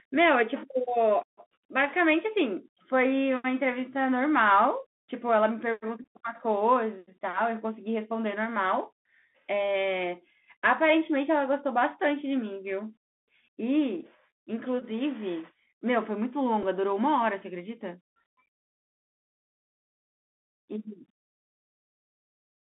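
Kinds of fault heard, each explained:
Bluetooth CVSD headset codec: The whole clip runs through the narrowband headset codec, where each sample is a single up-or-down bit at 64 kHz and the step size adapts as it goes. The speech sits in a band of roughly 200 Hz to 3.5 kHz with nothing above. The damage is plainly audible: a granular hiss under the speech, scratchy s sounds, and distortion wherever loud high content outruns the step.
Bluetooth headset packet repeated: Voice packets between the headset and phone went missing, and the chip decoded the previous packet's bits again to fill the gap. There are three spots: at 6.03 s, from 14.80 to 14.84 s, and at 16.63 s. The first two each cover about 15 ms of lost audio, which fits a run of four 3.75 ms packets. The last covers 7.5 ms, about two packets. Each run of repeats makes a brief buzz near 267 Hz until good packets return.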